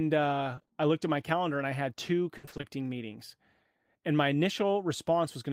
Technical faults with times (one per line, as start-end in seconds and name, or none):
0.55-0.71 repeated packet loss (robotic sound)
2.37-2.65 repeated packet loss (robotic sound)